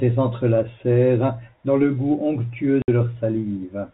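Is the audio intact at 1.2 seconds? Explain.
Yes, the speech is intact at 1.2 seconds, with nothing breaking up the sound at that moment beyond the narrow telephone band of its G.711 coding.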